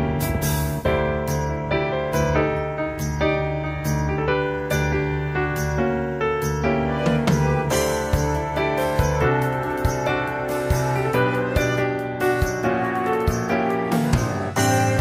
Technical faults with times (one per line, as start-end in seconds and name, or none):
none